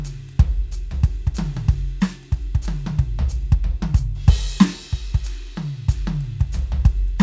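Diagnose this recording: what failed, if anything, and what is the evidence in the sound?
Nothing failed in this music.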